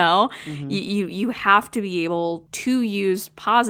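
No technical faults are audible anywhere in this speech recording.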